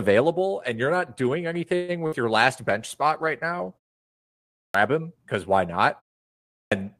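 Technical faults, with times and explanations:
1.75–1.91 s, call audio freeze: the sound stalls and its last moment is drawn out as a buzzy, fading hiss for about 130 ms. Then it carries on exactly where it stopped, with nothing skipped. The likely cause is packets held up in transit, so the jitter buffer ran dry and the receiver had to invent sound until they arrived. The result is an inserted gap that pushes everything after it about 130 ms later.
2.06–2.15 s, burst of packet loss: a short smeared stretch of about 60 ms, where the preceding sound is held and dimmed into a decaying buzz or hiss. The audio then jumps ahead, so roughly 60 ms of real material is gone. Several consecutive packets never arrived in time to be played. The decoder concealed the hole by extending and attenuating what it had last received, then resumed further along.
2.48–4.94 s, call bitrate drop: the speech turns grainier and more watery, with a coarser, muffled texture, at its worst for about 1.9 s before clearing. 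This fits Opus being told to spend far fewer bits, roughly from 32 down to 18 kbps, after the call's bandwidth estimate fell. With fewer bits, the codec quantises the spectrum more crudely and sheds fine high-frequency detail compared with its normal 12 kHz band.
4.41 s and 6.34 s, clipped start after a pause: in both places speech bursts out of silence abruptly, with its onset missing. About 0.33 s is lost at the first point, after a 0.7 s pause, and about 0.38 s at the second, after a 0.41 s pause. During those silences the output device dropped into a sleep state. It needed time to wake and lock again, so the opening of each new phrase was swallowed before playback resumed.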